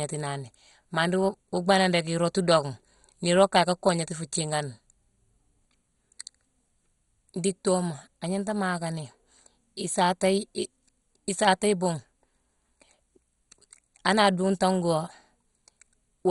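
Throughout the speech, MP2 compression at a starved bitrate has likely dropped the upper sub-bands, so nothing survives above 11.2 kHz and the sound turns dull. The remaining bands flicker with heavy gurgling, granular distortion, which fits a rate near 56 kbps.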